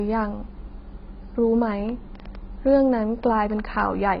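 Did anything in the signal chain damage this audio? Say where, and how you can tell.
Yes. At the codec stage, the speech has almost certainly been through a low-rate AAC compression encoder. Nothing survives above 5.5 kHz for the whole clip, so the top octave is gone and the voice sounds dull and boxed-in. Heavy coding damage smears consonants and gives sibilants a fizzy, warbling texture. The encoder has spent its few bits on the lower bands and discarded the rest, which fits AAC-LC squeezed to around 16 kbps.

From 1.72 s to 3.76 s a train of clicks sits on top of the speech, about ten sharp ticks at roughly five per second, spaced unevenly, peaking a few dB above the speech level. Because they have a consistent shape and ignore what the speech is doing, they come from the hardware side rather than the content, likely electrical interference in the analogue wiring or a faulty connection or power supply, injecting pulses into the stream.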